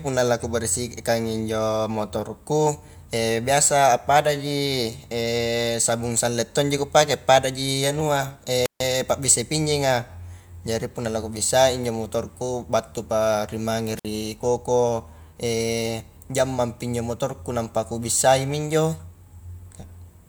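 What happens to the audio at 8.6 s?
A wireless microphone squelch dropout from 8.63 to 8.80 s: the radio signal fades, a burst of hiss rises, and the receiver's squelch mutes the speech for about 144 ms.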